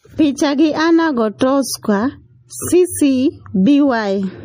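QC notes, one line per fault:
throughout: MP3 compression. The sound has a plainly audible watery, swirling quality, and nothing is present above 15.3 kHz. The likely cause is an MP3 encoder starved of bits, at a rate that points to around 40 kbps. It cuts the treble at a fixed point and drops quieter frequency lines that flicker in and out between frames. Unlike broadband noise or a simple low-pass filter, the damage shifts constantly.
1.38 to 1.41 s: pre-echo. A short hiss lasting about 27 ms leads into a sharp onset, and the onset itself sounds softened. The transform block containing that attack spread the quantisation noise meant for the loud part across the whole block, so it leaks into the quiet moment just before. Unlike a click or a dropout, it is a brief smear of noise that arrives ahead of the attack, never after it.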